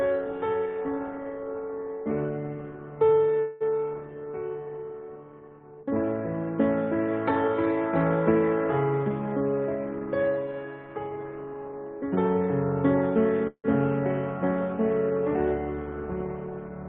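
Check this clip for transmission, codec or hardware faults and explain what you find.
Two call audio freezes occur, at 3.39–3.63 s and 13.47–13.66 s. The last sound stretches into a fading buzz for about 0.21 s, then 0.17 s with a 70 ms silent tail, likely from delayed packets draining the jitter buffer. The spectrogram shows smeared horizontal bands, and the audio resumes with nothing lost.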